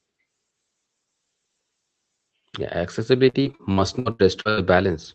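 From 3.29 to 4.59 s, repeated packet loss gives a choppy, robotic sound. Gaps of up to 79 ms are patched by repeating the preceding sound, covering about a third of the stretch, and appear as smeared, repeated frames on a spectrogram.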